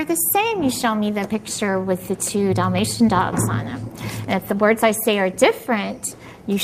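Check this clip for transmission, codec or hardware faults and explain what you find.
Two linked faults are present, both caused by mismatched clocks.

Clock drift between sender and receiver runs throughout: the sender's clock runs roughly 5 percent fast, overfilling the jitter buffer, unlike random network jitter, which has no consistent direction.

Repeated timing corrections occur from 0.04 to 6.34 s, with the receiver trimming short pieces to keep pace, so the audio plays at 105 percent speed. The edits are small and unevenly spaced, all in the same direction, rather than dropouts from packet loss.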